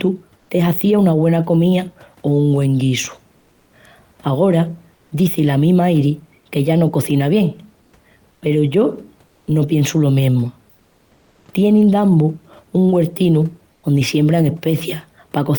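Comfort noise in place of the background appears in five short pauses in the speech: 0.39–0.47 s, 3.39–3.71 s, 4.95–5.11 s, 7.83–7.91 s and 13.75–13.83 s, lasting 80 to 320 ms. Each time, the room noise, which sits about 38 dB below the speech, gives way to a flat, featureless hiss, about 1 to 4 dB quieter. This is likely Opus discontinuous transmission: the sender stops sending audio in silence, and the receiver synthesises the filler.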